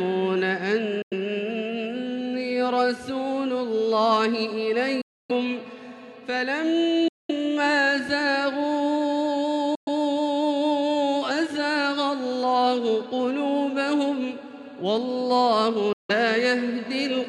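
The audio cuts to silence five times: at 1.02 s for about 93 ms, 5.01 s for about 279 ms, 7.08 s for about 209 ms, 9.75 s for about 116 ms, and 15.93 s for about 163 ms. Each time the sound resumes further along, as though it had kept playing through the hole. This is likely a Bluetooth dropout, where packets arrived at the headphones too late and were discarded, muting the output until valid data returned.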